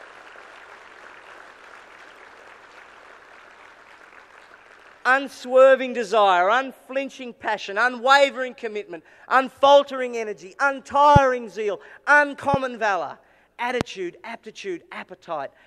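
Loud pops at 11.16–11.19 s, 12.54–12.56 s and 13.81–13.83 s: single sharp hits roughly 15, 10 and 20 dB above the surrounding sound, which carries on underneath. Each is likely a sudden voltage pulse from a plug, switch, static or driver glitch.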